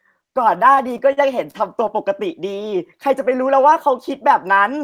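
Speech that catches and drags between 0.75 and 1.99 s, with seven brief hitches where the last sound is held over. These are repeated stalls (stutter): packets arrived late, the jitter buffer kept running dry, and the receiver stretched what it had, filling 119 ms in all, the longest gap 43 ms, with nothing lost. From 2.62 to 3.61 s the speech runs slower at unchanged pitch, at 93% speed, as a jitter buffer slow-down repeated pitch periods and pause fragments to add 71 ms of reserve.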